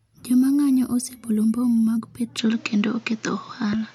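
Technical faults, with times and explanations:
2.39 to 3.94 s, input switched to a poorer device: the sound abruptly narrows with nothing above 7.6 kHz, shifts level by roughly 5 dB, and brings new background noise roughly 35 dB down, with no gap at the switch. This likely comes from a different microphone taking over, not a filter, since tone, level and noise change together.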